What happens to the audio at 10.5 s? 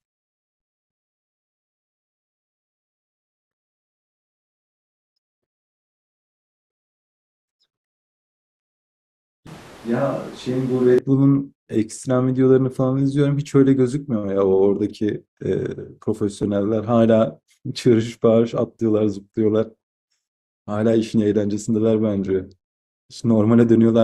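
From 9.47 to 10.98 s the speech abruptly turns hollow, roomy and thin, about 5 dB quieter with more room noise: likely a switch to a distant microphone, not added reverb.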